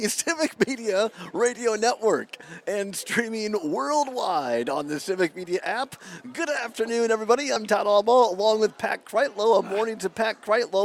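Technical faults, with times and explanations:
1.46 to 1.48 s and 7.55 s, damaged data in a compressed stream: brief glitches as corrupted bytes make the decoder misread frames, lose sync and hunt for the next header.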